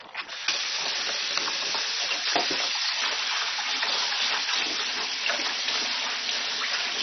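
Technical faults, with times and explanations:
Throughout, likely MP2 compression: sound is dull with nothing above about 6.1 kHz, upper sub-bands starved and flickering, gurgly granular grit, which fits a very low rate around 32 kbps.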